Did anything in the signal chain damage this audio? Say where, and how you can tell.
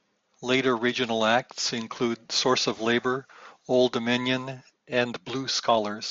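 No, nothing damaged this audio.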